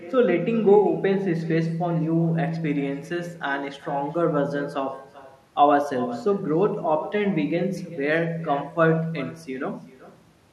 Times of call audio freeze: none

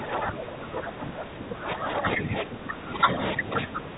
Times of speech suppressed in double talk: 0.00-3.97

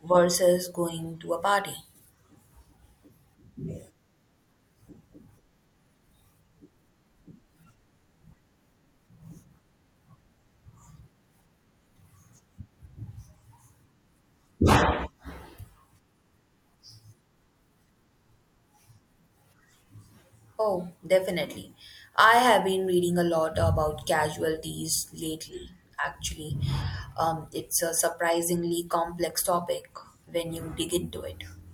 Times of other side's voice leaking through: none

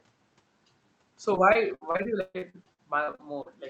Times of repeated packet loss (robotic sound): 1.35-3.47

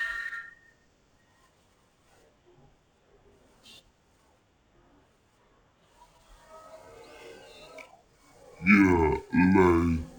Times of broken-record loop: none

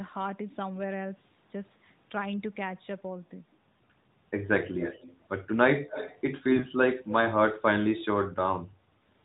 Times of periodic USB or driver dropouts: none

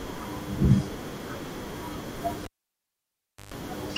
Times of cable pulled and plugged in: 2.44-3.54

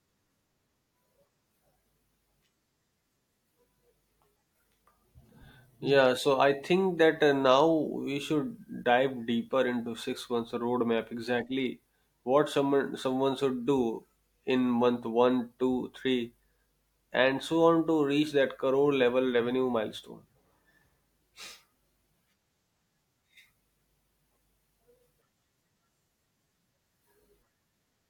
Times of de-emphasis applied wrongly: none

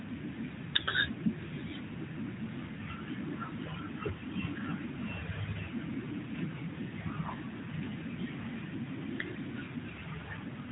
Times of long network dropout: none

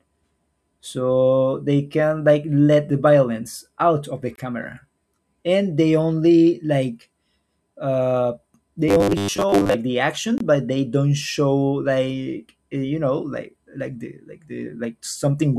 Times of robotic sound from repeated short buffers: 8.88-9.77

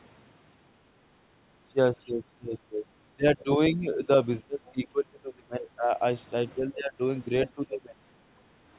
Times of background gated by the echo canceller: 8.26-8.65

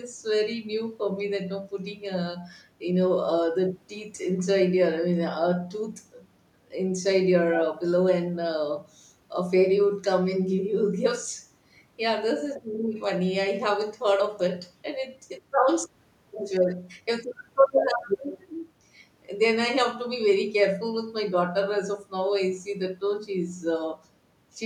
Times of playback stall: none

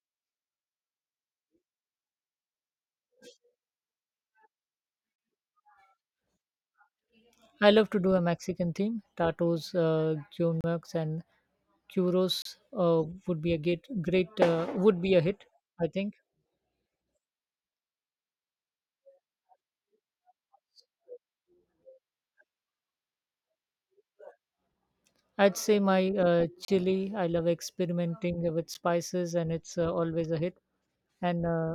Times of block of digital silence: 10.61-10.64, 12.42-12.45, 26.65-26.68, 28.74

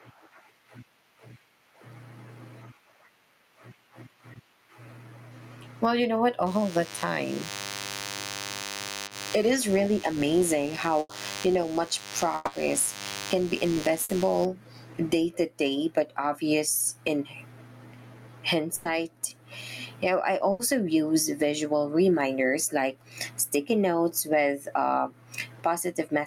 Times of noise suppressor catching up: none

